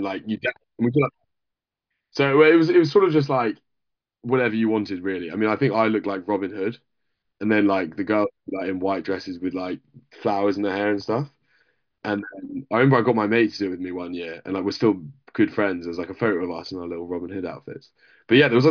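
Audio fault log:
Nothing stood out on listening to the speech.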